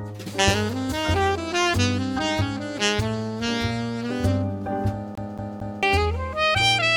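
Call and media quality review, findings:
CD stuck on one turn, 5.15 to 5.83 s. The same 225 ms segment plays three times, with a short mute at each jump. The probable component is the disc or pickup: a scratch at one spot makes the laser fall back a track every rotation, giving an even, rapid stutter.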